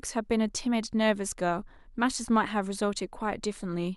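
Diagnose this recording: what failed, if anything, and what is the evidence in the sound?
Nothing in the speech stood out as a fault on listening, so there is no failed stage to point to.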